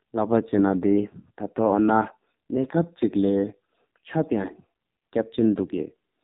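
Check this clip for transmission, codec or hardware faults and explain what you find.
The whole clip has been through an AMR narrowband mobile codec at a very low bit rate, and the damage is heavy. From start to finish, the speech was forced through a 2G/3G-style phone channel that samples at 8 kHz and rebuilds each 20 ms frame from a vocal-tract model driven by a few pulses. The harshness fits the 5.9 kbps mode. Nothing above 4 kHz survives, so the voice sounds dull and boxed-in, and the sparse pulses make it buzzy and synthetic.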